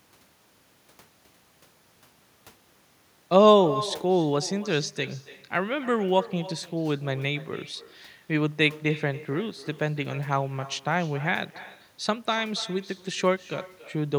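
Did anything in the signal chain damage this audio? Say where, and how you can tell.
Yes. The damage sits in call processing: an echo with no canceller runs through the whole clip. Every stretch of speech is followed, roughly 300 ms later, by a fainter, thinner copy about 17 dB below the direct signal. That trailing shadow is the far end's loudspeaker output re-entering its microphone and returning over the network round trip, with no echo cancellation stage removing it before it comes back.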